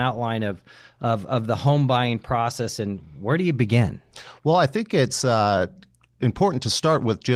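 A speech clip with no technical faults.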